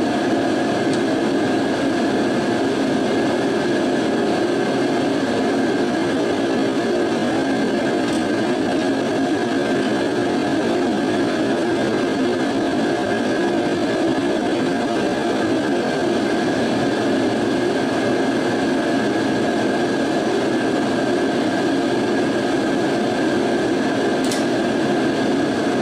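From 5.81 s to 16.01 s there is a time-stretched section: the pace drops abruptly to about 0.68 times normal while pitch holds steady, and the sound drags. The likely cause is software lengthening the passage by repeating short fragments.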